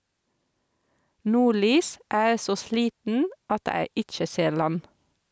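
Speech clip, passed through call-style microphone processing with content reaching up to 8 kHz, showing gain pumping throughout. The gain swings by around 5 dB, flattening the dynamics, likely because input gain was set far too high and a fast limiter keeps clamping it down.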